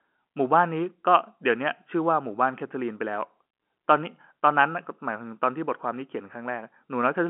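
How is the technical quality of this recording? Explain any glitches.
Nothing stood out on listening to this telephone-band speech recording, so there are no glitches to explain.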